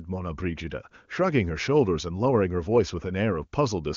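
No technical faults can be heard in this speech, which comes through the AMR wideband (HD Voice) codec at 23.85 kbit/s.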